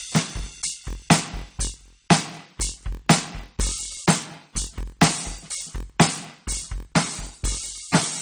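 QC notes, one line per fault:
throughout: transcoding between lossy codecs. The music shows two layers of coding damage at once: the artefacts of each codec are heard together, and the lowest cut-off in the chain remains. This likely comes from a low-rate AAC-LC encode re-encoded to MP3 around 50 kbit/s.
throughout: block size mismatch (padded). A steady buzz at 43.1 Hz sits under the music, and the music plays at 0.938 times normal speed with pitch about unchanged. Each block read is short of material and zero-filled at the end, which fits roughly 960-sample blocks read as 1024-sample blocks.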